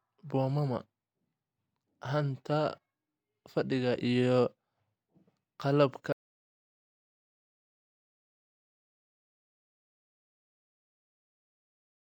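At 6.12 s the speech cuts out mid-flow and never comes back: an audio dropout to silence running to the end. It's plain silence, no room tone at all, so the input was likely lost while the recorder kept writing.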